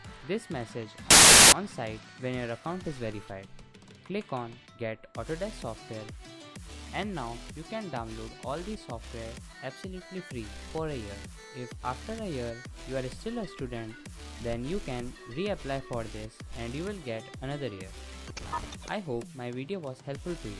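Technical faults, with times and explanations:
1.11 to 1.52 s, file tags played as audio: for about 0.42 s the sound is replaced by a burst of very loud white noise with abrupt start and stop edges. A block of embedded cover-picture data is being read as samples, and because image data is already compressed it looks random, so it plays as flat, loud static. Unlike clipping or a codec glitch, nothing of the underlying sound survives inside the burst, and its level is unrelated to the programme.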